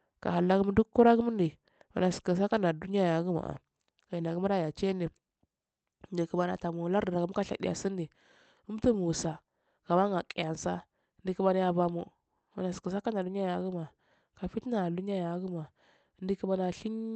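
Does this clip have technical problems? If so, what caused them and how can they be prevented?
No, this clip has no technical problems.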